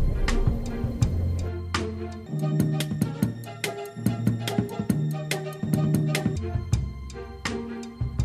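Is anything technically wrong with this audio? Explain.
Yes. From 2.26 to 6.36 s there is a section at the wrong speed: it plays 1.75 times too fast, likely because it was clocked at the wrong rate. The sound turns high and rushed, pitch rising about ten semitones. Unlike a plain pitch shift, tempo and pitch jump together.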